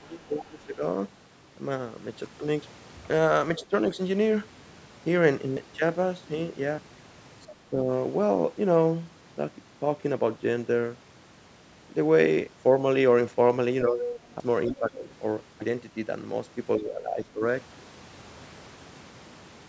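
From the start to 0.83 s the sound sinks by about 20 dB. This is speech suppressed in double talk, likely from an echo canceller that ducked the near talker while both sides spoke. The same dips return at 3.59–3.98 s (about 10 dB), 7.48–7.88 s (about 15 dB), 13.88–15.07 s (about 10 dB) and 16.77–17.42 s (about 15 dB).

At 2.62 s the sound makes an abrupt jump forward, with no gap. This is a dropped buffer (overrun), likely an unread block of roughly 70 ms overwritten by the hardware. It recurs at 5.57, 6.78, 14.40 and 15.62 s.

A faint scrap of another voice, about 20 dB under the talker, appears at 3.59–3.66 s and 7.50–7.55 s. This is the other side's voice leaking through, likely loudspeaker echo the canceller failed to remove. It swells to only about 5 dB below the talker at 14.01–14.78 s.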